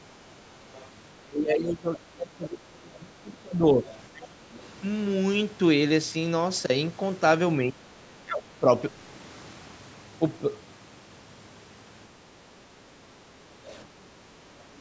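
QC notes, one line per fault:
0.30–0.89, 3.90–3.98, 13.65–13.80 s: other side's voice leaking through. A faint second voice, about 30 then 25 dB below the talker, likely residual loudspeaker echo the canceller missed; it shows as thin, weak harmonic traces under the main speech.
1.18–4.57, 7.63–7.92, 8.23–8.70, 13.94–14.28 s: speech suppressed in double talk. The talker's level collapses by roughly 25, 20, 15 and 35 dB, likely from the canceller ducking during overlap; the waveform shows sudden notches.
13.23–13.35 s: background gated by the echo canceller. Room noise dips about 6 dB for a tenth of a second while the loudspeaker plays, then recovers, leaving a brief pale gap in the spectrogram's noise floor.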